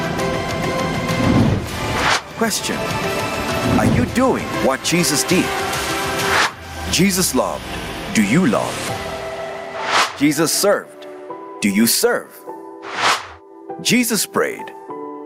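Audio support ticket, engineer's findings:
Gain pumping throughout: a gain swing of around 15 dB. Waveform looks squashed, with peaks at near-equal height. Input gain likely set far too high, with a fast limiter clamping.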